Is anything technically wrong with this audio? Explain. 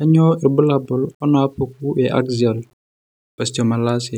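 Yes, there's a fault. Throughout, quiet speech has a grainy, signal-following grit, likely low bit depth without dither: around 10 bits, rounded, leaving error roughly 45 dB down.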